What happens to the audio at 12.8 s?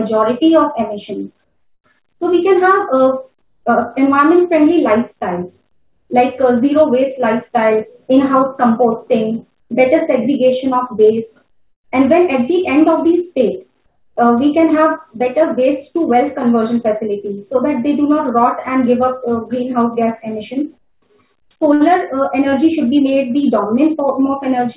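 Nothing goes wrong at 12.8 s: the audio continues intact through that moment, carried over the call path with its narrow telephone band that stops at 4 kHz.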